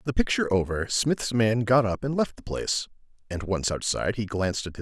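No technical faults can be heard anywhere in this recording; the signal stays steady and continuous throughout.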